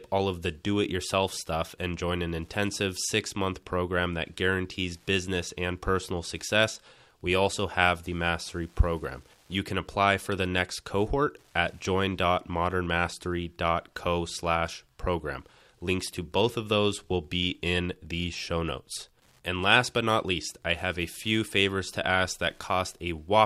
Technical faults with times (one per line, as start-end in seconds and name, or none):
0.00-23.45 Wi-Fi interference